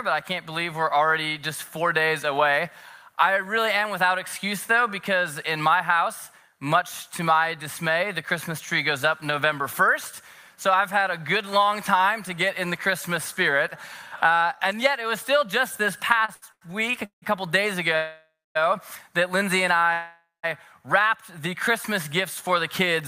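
From 16.25 to 17.24 s the audio shows repeated stalls (stutter): five short gaps, the longest 168 ms, in which the last sound is held and stretched before playback moves on. Packets were arriving late or more slowly than they were played out, so the jitter buffer kept running dry. About 386 ms of concealment fills roughly 39% of that span. Nothing is lost, but the passage drags and stutters.

A call audio freeze follows from 17.96 to 18.57 s, and a second from 19.93 to 20.45 s. In each, the final sound continues as a decaying buzz or hiss that fades out. The first freeze is silent for about 240 ms of its 593 ms, and the second for about 170 ms of its 501 ms. Audio then resumes where it stopped, with no content missing. Each event adds delay equal to its length. The likely cause is packets held up in transit, which emptied the jitter buffer.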